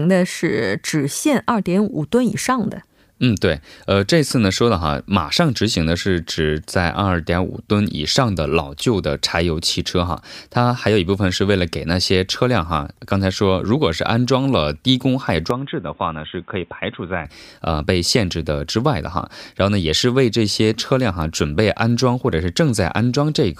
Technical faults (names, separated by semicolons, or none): input switched to a poorer device